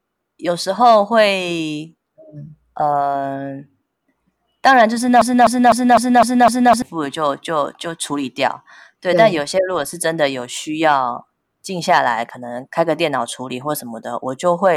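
The playback or stream likely stalled at 5.22 s and kept resending its last buffered fragment, producing a broken-record loop: a 253 ms slice of speech repeats exactly six times back to back until 6.82 s, and the speech that belonged there is lost.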